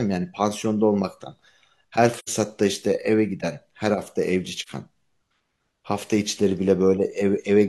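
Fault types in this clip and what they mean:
AAC frame loss with muting: lost frames decode as silence, leaving soft-faded gaps of 85 ms and 43 ms, seen as tapered waveform dips and blank vertical spectrogram strips.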